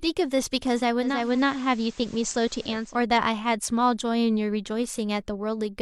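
From 0.96 to 3.04 s, digital radio blending to analogue: a 0.44 s cross-fade to FM adds hiss, roughly 25 dB below the signal.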